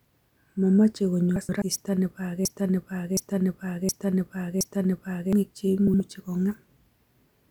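Frames out of order at 1.36 to 1.62 s mark this speech clip. Two neighbouring 128 ms runs of audio were decoded in swapped sequence, so that quarter-second plays with its halves exchanged. It comes out as a garbled flutter, though no time goes missing. The same fault returns at 5.87 to 6.00 s, this time with two 64 ms halves traded, giving a shorter, tighter stutter. A broken-record loop runs from 2.45 to 5.33 s. A 0.72 s fragment repeats exactly, back to back, four times, likely because the player or stream stalled and kept resending the last piece it held. Whatever speech belonged in those seconds is gone.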